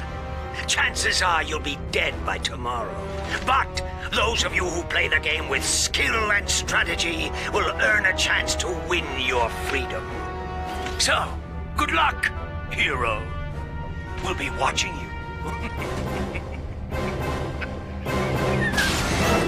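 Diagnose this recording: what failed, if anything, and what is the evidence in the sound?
Nothing failed; no stage shows any audible fault.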